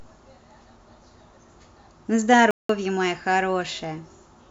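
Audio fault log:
2.51 to 2.69 s, block of digital silence: the speech stops dead for about 0.19 s, then resumes just as abruptly. The samples in that span were replaced by silence, likely because the output buffer was not filled in time. The gap's length fits a block of 8192 samples. With no fade at either edge, the waveform cuts to silence and back. Between them is a clear hole.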